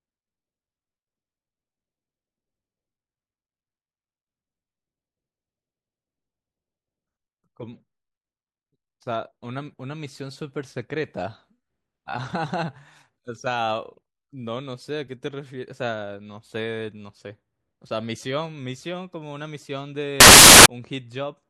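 Samples built from the wrong bytes appear from 20.20 to 20.66 s, near the end of this speech clip. For that stretch of roughly half a second, the reader assembles each sample from misaligned or misordered bytes, so the rapidly fluctuating low-order bits end up as the most significant part of every value. The result is a burst of loud, harsh broadband noise that replaces the speech.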